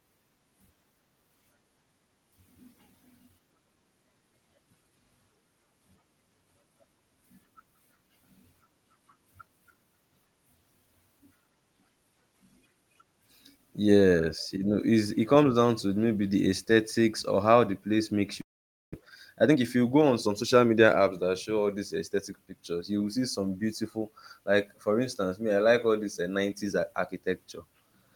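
At 18.41 s, right after "how the place makes", the sound breaks up until 18.95 s. The last sound smears into a fading buzz or hiss, then drops to silence. When the audio returns, about 0.3 s of material is simply gone. This is most likely a long network dropout. Packets stopped arriving, the receiver stretched what it had, then gave up and played nothing. The gap also left roughly 0.2 s of extra delay in the stream.

From 19.29 s to 21.13 s the speech runs fast, at about 111% speed. Pitch stays the same, but the delivery sounds hurried. This is a jitter buffer speed-up. The buffer held more audio than it aims for. To catch up, the receiver cut many tiny pieces, each one or a few pitch periods long. Together they remove roughly 0.2 s.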